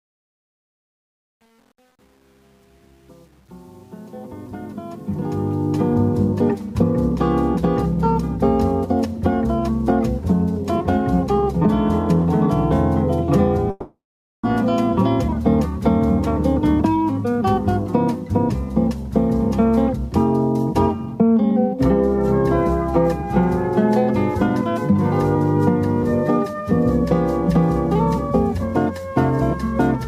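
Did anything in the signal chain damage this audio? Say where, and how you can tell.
Yes. The fade-in over the first 5.94 s has truncation distortion on a fade from a gain or sample-format stage. The quiet start, worst up to about 4.8 s, comes out gritty, as if only about 9 bits survived with no dither to smooth the steps.

From 13.70 to 14.44 s there's a long network dropout, likely from lost packets. The receiver stretches the last sound into a fading buzz or hiss for a moment, then roughly half a second of silence follows before the audio resumes with that chunk gone.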